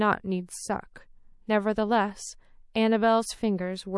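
Throughout this speech clip the upper detail has a watery, swirling quality, with s sounds turning metallic and chirpy as weak high-frequency content flickers in and out from frame to frame. That is the sound of MP3 compression, likely at a low bitrate around 48 kbps, with the encoder discarding what its hearing model rates as least important. Unlike a plain low-pass filter, the loss shifts over time instead of sitting at a steady dull edge. From 0.46 to 0.49 s a brief hiss, about 13 dB above the surrounding noise and roughly 25 ms long, runs just ahead of a sharp onset, and the attack itself sounds softened. This is pre-echo: the codec spread its quantisation noise across a transform window of about 48 ms, so noise sized for the loud attack also filled the quiet moment before it. That smearing points to the encoder staying in long blocks instead of switching to short ones at the transient. 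What sets it apart from a click, dropout or reverb is that the noise comes before the attack rather than after it.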